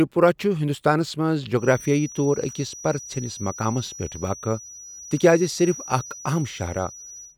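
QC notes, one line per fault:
1.53 to 7.37 s, feedback whistle: a thin, steady tone at 5.8 kHz enters at 1.53 s and holds to the end, sitting roughly 20 dB beneath the speech and swelling and fading slowly in level. Likely a loudspeaker-to-microphone loop held just at the edge of feedback, sustaining one frequency without building further.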